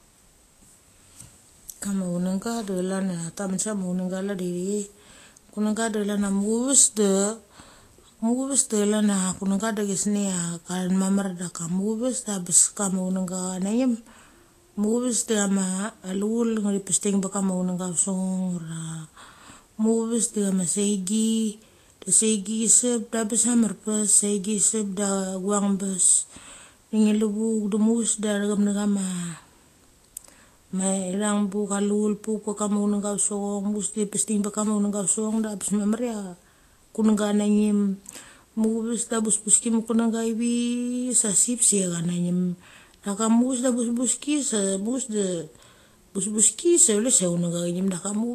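Speech, with a hard ceiling at 14.2 kHz for the whole clip. On a spectrogram, energy stops along a flat horizontal line, with nothing above it, while the waveform looks unremarkable. The sound has the smeared, watery texture of a low-bitrate codec. This is likely low-bitrate audio saved at a high bitrate: a lean first encode, consistent with Vorbis at around 33 kbit/s, re-saved as MP3 at a generous rate that preserves the earlier losses without restoring them.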